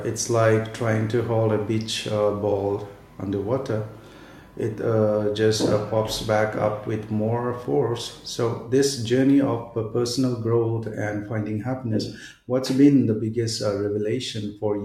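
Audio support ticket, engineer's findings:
No faults found on listening; speech path normal.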